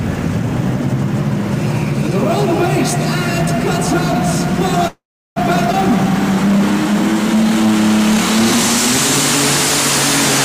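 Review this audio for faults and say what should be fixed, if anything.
A call audio freeze runs from 4.87 to 5.38 s. Delayed packets likely emptied the jitter buffer, so the last sound smears into a fading buzz or hiss and then goes silent for 350 ms. A spectrogram shows decaying horizontal bands, then a blank strip.

A skip ahead follows at 5.72 to 5.75 s. Roughly 150 ms of audio is dropped and the two sides are butted together. The waveform shows an abrupt splice with almost no gap.

A jitter buffer slow-down from 7.36 to 7.72 s repeats pitch periods, adding 42 ms at 91% speed. The spectrogram shows stretched, evenly repeated cycles at unchanged pitch.

Prevent these by giving the jitter buffer more steady headroom and reducing network delay variation, so it neither runs dry nor overflows and has to discard audio.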